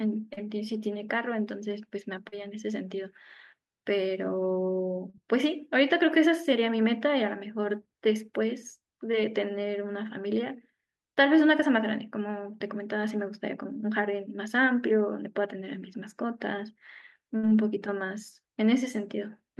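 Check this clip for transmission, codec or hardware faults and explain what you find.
There are two kinds of transmission fault, both from lost packets: four short concealed packet losses and one burst of packet loss.

The short concealed packet losses fall at 0.33 to 0.39 s, 2.29 to 2.34 s, 5.10 to 5.16 s and 9.12 to 9.15 s. In each, a small slice of the speech arrived too late or not at all: about 40 ms in the first three and 20 ms in the last. The decoder extended the preceding sound over the hole, roughly 33 to 37 ms of synthetic fill at the first three and 13 ms at 9.12 s, then crossfaded back into real audio. Each is heard as a brief smear or wobble.

The burst of packet loss runs from 17.37 to 17.45 s. About 60 ms of consecutive audio went missing, and the receiver bridged nearly all of it, about 59 ms, by continuing the last sound while fading it down. The result is a short held buzz or decaying hiss, after which the speech picks up further along with the intervening sound lost.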